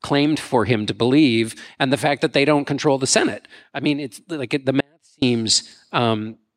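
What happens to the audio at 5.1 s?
At 5.1 s the speech is inside an audio dropout to a faint residue, running from 4.81 to 5.22 s, just after "mean it's like the". For about 0.41 s the signal cuts out abruptly. Only a faint sound remains, roughly 40 dB down. The cause is likely a brief loss of the wanted signal while the path after the break stayed live.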